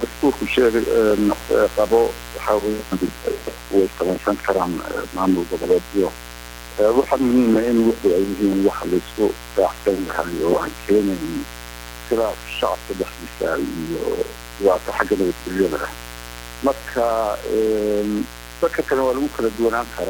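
A mains buzz runs throughout. Switching spikes from 60 Hz mains leak in, twice per cycle. The result is a steady, raspy buzz, fairly prominent under the sound.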